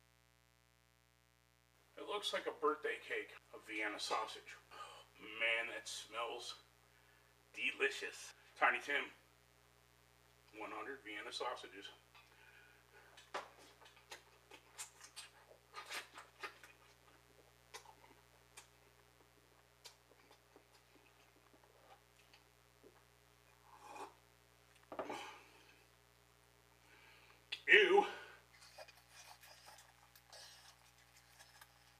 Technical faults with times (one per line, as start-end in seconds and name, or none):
0.00-31.99 mains buzz